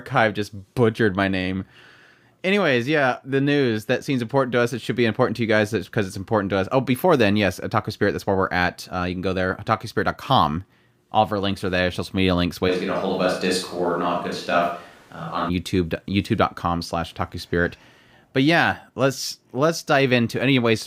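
Right after "media links", at 12.70 s, the speech suddenly goes roomy and hollow and loses its low end, and it stays that way until 15.48 s, when it snaps back just as abruptly. That's a switch to a distant microphone, most likely the close mic's feed dropping out so a mic farther away took over. Loudness barely moves, but you hear more of the room, with background noise sitting roughly 30 dB under the speech.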